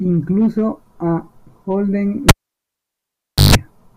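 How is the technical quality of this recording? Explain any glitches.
The recording has one real problem: a cable pulled and plugged in. At 2.29 s there's a pop and the speech drops to near silence for about 1.2 s. A roughly 150 ms burst of 50 Hz mains buzz follows while only the tip makes contact, then a second pop at 3.55 s as the signal reconnects.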